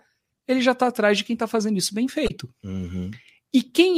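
Right after "está fazendo isso bem", from 2.25 to 2.31 s, damaged data in the compressed stream gives a brief glitch, a chirp, squawk, click or short hole. The decoder misreads corrupted frames and hunts for the next valid header.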